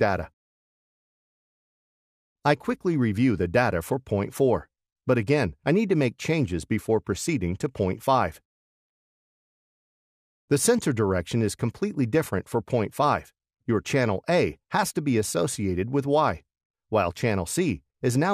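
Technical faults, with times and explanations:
8.46 s to the end, sample clock jitter: an unsteady converter clock shifts samples by well under a microsecond, adding hiss roughly 50 dB down that grows with loud, bright passages.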